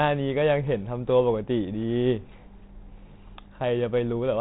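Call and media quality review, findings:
Nothing stood out on listening to this speech clip, and no fault was found to log.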